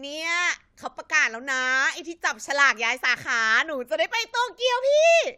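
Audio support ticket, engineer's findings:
No faults found on listening; nothing to report.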